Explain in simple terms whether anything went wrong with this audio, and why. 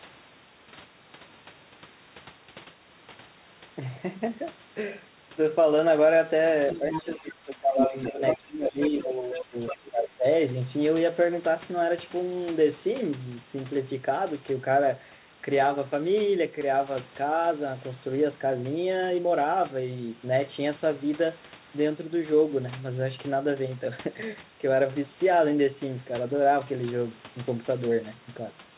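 Between about 6.7 and 10.3 seconds the speech runs into trouble. There's a second voice in the background, the other side's voice leaking through, at 6.70–7.32, 7.78–8.46, 8.81–9.06, 9.33–9.43 and 9.67–9.89 s. Most of it sits quieter than the talker, but at 7.78–8.46 it's about as loud. The likely cause is the talker's loudspeaker feeding back into their mic, with the echo canceller missing some of it.

In that same stretch the talker's own voice keeps ducking, which is speech suppressed in double talk. There's a brief dip at 6.73–6.83 s, then clear drops across 7.03–7.95 and 8.11–10.25 s. That's likely the echo canceller turning everything down because it couldn't tell the talker apart from the echo while both were talking.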